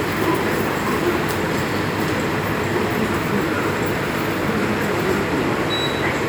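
No technical faults can be heard anywhere in this recording of sounds.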